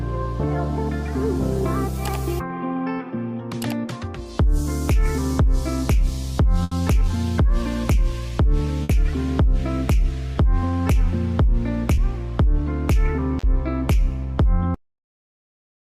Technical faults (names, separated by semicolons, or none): burst of packet loss; short concealed packet loss; cut-off end